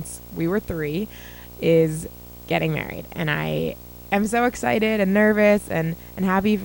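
Video or display buzz runs throughout: screen wiring leaks a 59.94 Hz field-rate buzz and 15.7 kHz line whine, about 20 dB down, drawn as steady spectrogram stripes.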